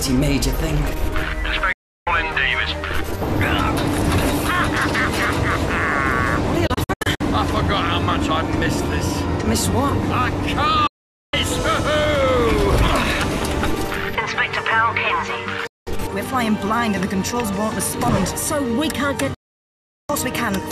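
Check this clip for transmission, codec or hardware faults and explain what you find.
There are five digital broadcast dropouts. The sound snaps to silence through a very fast fade of about 8 ms at 1.72–2.07 s, 10.87–11.34 s, 15.67–15.87 s and 19.34–20.10 s, the last being the longest at about three quarters of a second. At 6.67–7.21 s it breaks into several short holes of up to 72 ms instead. Each time, the receiver muted after losing the signal or rejecting corrupted frames, and whatever was sent in those gaps is gone.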